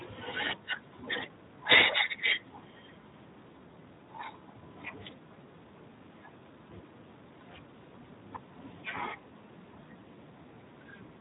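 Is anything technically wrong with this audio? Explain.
Yes. Throughout, the speech carries Speex codec damage: a low-rate CELP coder, plausibly around 11 kbps, has too few bits for the excitation signal, so voicing turns noisy and hoarse, and nothing remains above about 3.8 kHz.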